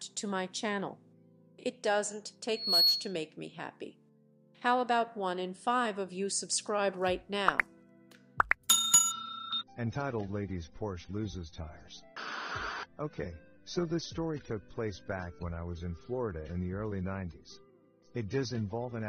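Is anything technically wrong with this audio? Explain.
Yes, two things. From 2.49 to 3.21 s there's a loudspeaker feedback squeal: a mic is hearing the speaker it feeds, and at 4.3 kHz the loop gain tops one, so that tone swells over roughly a third of a second to about 10 dB above the audio.

Then from 9.11 s to the end, the stream switches to a lower bitrate with no gap. The treble suddenly vanishes above 6.3 kHz and the sound turns duller and more artefact-laden, which fits an adaptive stream stepping down from about 96 to 24 kbit/s AAC.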